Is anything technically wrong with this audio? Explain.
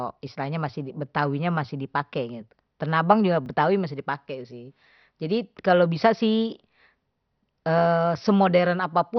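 Yes. Throughout the clip, the speech was likely MP2 compressed at a low bitrate, which starves its upper sub-bands. Nothing is heard above 6.2 kHz, and the result is dull and gurgly with granular distortion. At 3.46 to 3.48 s, just after "abang juga," there is a repeated buffer. A late delivery made the device replay its last chunk once, which fits a 20 ms buffer. It is heard as a brief hard-edged buzz, with nothing skipped.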